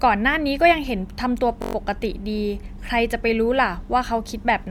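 At 1.62 s the system stalled while the sound hardware kept cycling one ring buffer, a system hang loop. A 21.3 ms slice, fitting a 1024-sample buffer, repeats six times until 1.75 s, a brief 46.9 Hz buzz in the speech, with almost nothing skipped.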